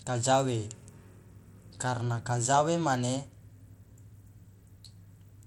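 From start to finish the speech carries a gritty, grainy haze, and the upper treble flickers in and out rather than holding steady, with aliasing riding on the sound. Nothing is present above 19.4 kHz. The damage is plainly audible and points to Bluetooth SBC compression, likely at a low setting around 96 kbps. Too few bits reach the weak top sub-bands, so they drop out intermittently, and the remaining bands are coarsely quantised, producing the grit.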